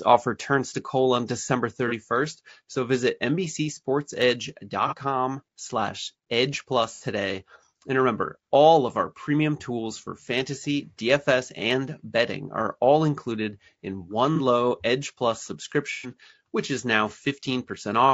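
From the start, the speech sounds rough and grainy. Noise sits between the pitch harmonics, and the top band sounds thin and synthetic. The likely cause is low-delay AAC compression, AAC-ELD, at a rate that fits a 32 kbps stream. Its short frames resolve pitch harmonics poorly and spend bits fast. At this rate the coder cannot keep the fine harmonic structure, so the damage is plainly audible throughout.

AAC frame loss with concealment then breaks in five times. The first gap is at 1.88 to 1.93 s, and the second at 4.88 to 4.94 s. Each lasts about 30 ms, which fits one lost frame. At 6.95 to 7.04 s, about 60 ms is filled, which fits two frames. At 14.36 to 14.40 s, just after "all included in one", another 30 ms patch occurs. The longest runs from 15.92 to 16.12 s, about 120 ms, just before "which is now". In each gap, the decoder rebuilds the sound from the last good spectrum. The result is a brief smeared, noisy or phasey patch.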